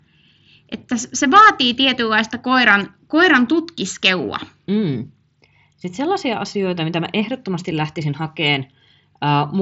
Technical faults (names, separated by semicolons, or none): none